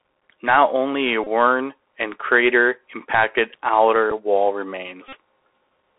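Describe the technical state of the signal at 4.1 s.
At 4.10 s there is a Bluetooth headset packet repeat. About 11 ms of audio goes missing, which fits three lost headset packets. The decoder plays the last good packet again in their place. The result is a short buzzy tick rather than a sustained tone.

Underneath, the Bluetooth CVSD headset codec is active throughout. Its narrowband line confines the sound to roughly 300 Hz to 3.4 kHz. The adapting step size leaves plainly audible granular hiss at this moment too.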